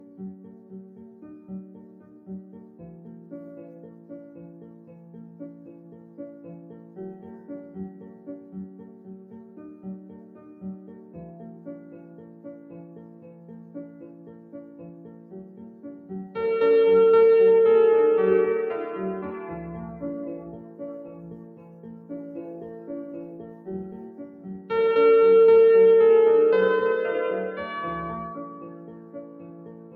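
Noise suppressor applied to music or sounds, throughout: a speech-tuned suppressor treats sustained tones and tails as noise, swinging level by around 20 dB, so sound pumps, flutters or thins.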